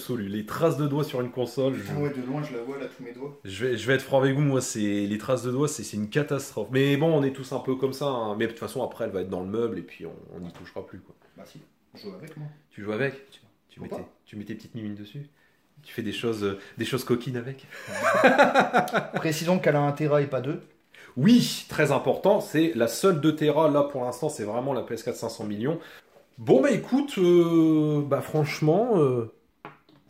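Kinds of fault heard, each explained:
Nothing stood out as a fault on listening to this clip.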